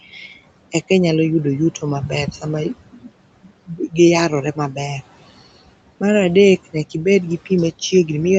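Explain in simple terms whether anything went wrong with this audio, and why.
Two problems come from the call's noise suppressor. The first, noise suppressor artifacts, runs through the whole clip: the suppressor pushes the room's background noise down hard between phrases and lets it back up under speech, so the leftover noise pumps.

The second is speech cut by the noise suppressor, heard at 2.92–3.10 s, 3.67–3.96 s and 4.55–4.78 s. In each spot the suppressor mistook quiet parts of the speech for background and turned them down with it, so short stretches sound swallowed or suddenly faint.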